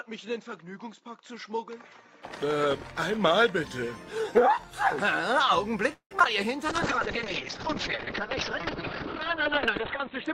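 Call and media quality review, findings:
Input device: 0.00–2.25 s, dull and boxy, nothing above 7.6 kHz, level about 10 dB down, a faint noise floor of its own. Likely an input switched to a poorer device, narrower band. Switch-over clean, no silence.

Repeated packet loss (robotic sound): 5.93–6.26 s, choppy, pieces missing. Jitter buffer/PLC. Five gaps, longest 173 ms. Concealment stretches the last sound across 206 ms, about 63% of the span, and 40 ms are simply dropped.

Call bitrate drop: 6.70 s to end, rough, watery, muffled. Opus encoder after the bandwidth estimate fell, 96 to 8 kbps. Audio band cut from 20 kHz to 4 kHz, at the floor for 3.06 s, no recovery.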